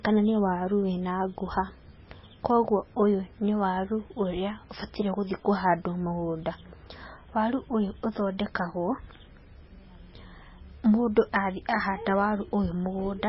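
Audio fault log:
Throughout, MP3 compression: the speech has nothing above about 5.6 kHz and a watery, swirling texture, with s sounds turning metallic and attacks smeared. This heavy damage is likely from a very low bitrate, around 17 kbps, where the encoder cuts treble and drops weak frequency lines frame to frame.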